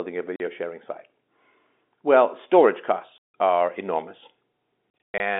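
At 0.36 s, just before "sharing site", the sound drops out for 40 ms, and at 3.18 s a longer hole of 160 ms precedes "are enormous". From 4.90 to 5.20 s a run of gaps totalling 200 ms, the longest 120 ms, chops the audio. This is packet loss filled with silence. Every length fits 20 ms packets. Unlike concealed loss, nothing is repeated or smeared: each hole is dead silence with hard edges, heard through the narrow telephone band of the G.711 line.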